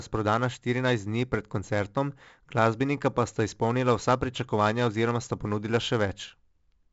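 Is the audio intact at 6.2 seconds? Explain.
No. At 6.2 seconds the speech carries 4-bit ADPCM compression, present for the whole clip. Each sample is coded as a coarse step from a prediction, leaving heavy gritty hiss that tracks loud passages, with nothing above 7.7 kHz, which fits roughly 64 kbps.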